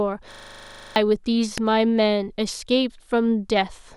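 From 0.32 to 0.96 s the speech is replaced by a system hang loop: the playback side stalled while the hardware kept replaying the same 40 ms slice of its buffer, sixteen times in a row. The result is a rough buzz at 25 Hz, and roughly 0.7 s of the real signal never arrives. On a waveform the span shows one short shape stamped out identically; a spectrogram shows frozen content striped by vertical lines every 40 ms.

At 1.58 s a sharp snap cuts across the speech, an electrical switching spike most likely picked up from a nearby switch or discharge arcing into the audio line. It lasts only a couple of milliseconds and sits on top of the speech without interrupting it. On the waveform it appears as a needle-thin excursion; on a spectrogram it is a narrow vertical streak running through the full frequency range.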